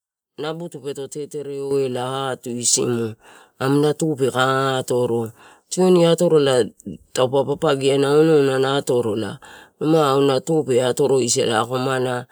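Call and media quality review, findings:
Microphone volume stepped up at 1.71 s, about 8 dB, then again at 2.73 s, about 4 dB. Speech and room background jump together in a single step each time, no ramp. Points to call software's automatic input gain raising the capture device volume when the mic read too quiet. Both steps land roughly a second apart. Net rise about 12 dB within the clip's first 3 s.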